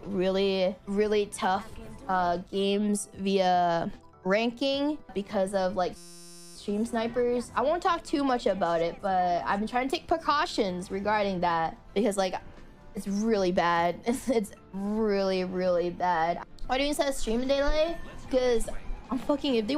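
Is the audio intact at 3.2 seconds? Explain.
Yes, the audio is intact at 3.2 seconds, with no dropout, click, distortion or other fault at that moment.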